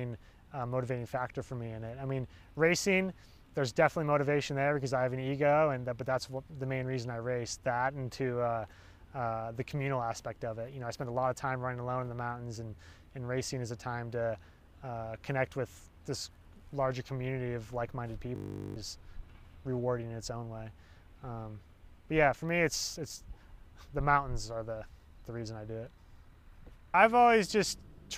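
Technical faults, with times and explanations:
18.36–18.76 s, system hang loop: a frozen system replays one 20 ms slice twenty times, making a 50 Hz buzz with identical waveform cycles and 50 Hz-spaced spectrogram lines.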